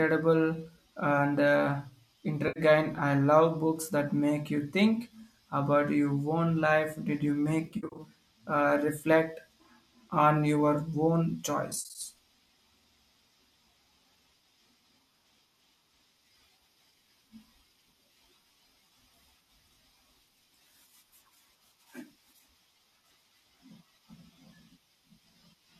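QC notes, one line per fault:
2.48–2.60 s, 7.66–8.01 s, 11.71–12.01 s: AAC frame loss with concealment. An 80 ms gap, then losses of 210 ms over 320 ms and 170 ms over 260 ms, with the longest runs roughly 70 ms and 50 ms. The decoder refills each loss from the last good spectrum with scrambled phase, so the audio smears into brief noisy, phasey patches. On a spectrogram these show as blurred vertical blocks where harmonic striations vanish. The waveform keeps its level but loses clean periodic shape.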